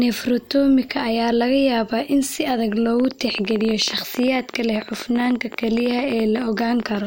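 From 3.00 s, right after "yaabaa in si adag", a train of clicks runs until 6.96 s, around fifty in all. They arrive at about 14.7 per second but at an uneven pace, each pulse much the same sharp shape and peaking roughly 10 dB above the speech. The result is a rapid, ragged ticking laid over the talker and audible in the gaps too, likely from electrical interference or a faulty connection or power supply.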